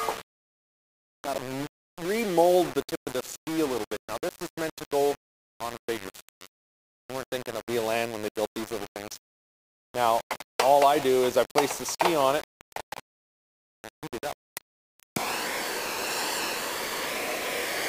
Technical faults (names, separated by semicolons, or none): low bit depth without dither